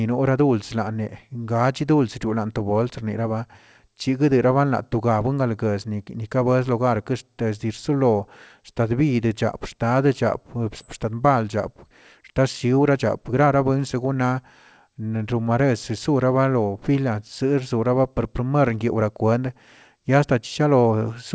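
At 10.80 s the speech skips ahead. Roughly seven tenths of a second is dropped and the two sides join almost directly, with no gap.

From 11.06 to 14.39 s comes a jitter buffer speed-up. Short pitch-period pieces are cut repeatedly, about a third of a second in all. Speech runs 8% faster at unchanged pitch, sounding hurried.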